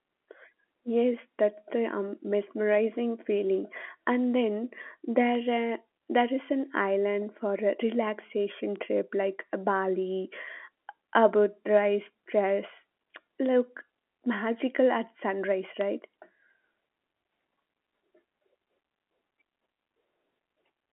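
At 5.35, 8.76, 12.50 and 15.81 s, a bit error spike gives one sharp, broadband tick. A flipped bit jolts a single sample, which snaps straight back.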